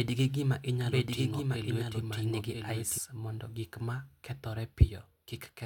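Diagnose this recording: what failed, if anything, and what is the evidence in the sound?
Doubled audio track until 2.98 s: a copy about 5 dB down trails by roughly a second and stops abruptly without echo decay, likely from a duplicated capture path.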